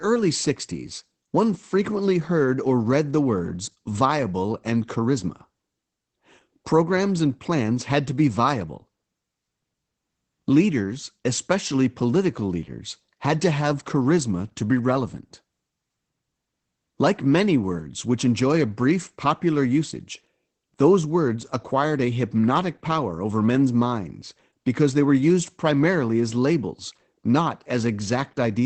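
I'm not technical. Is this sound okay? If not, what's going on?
No. From start to finish the speech carries Opus voice compression, a squeeze applied to save data. Nothing above about 8.7 kHz survives, so the voice sounds muffled and lacks crispness in its s and t sounds. It also has a hoarse, faintly robotic edge, because the coder rebuilds the voice from a rough model. A plain treble cut would only dull the voice. This compression adds that grainy, synthetic texture as well.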